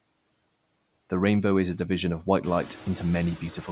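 Speech clip with noise suppressor artifacts throughout: the suppressor pulls steady background noise down by about 18 dB between words, so the noise pumps up again underneath speech. The room noise itself rises by about 12 dB around 2.5 s. Nothing is heard above 4 kHz, which points to narrowband G.711 mu-law call coding.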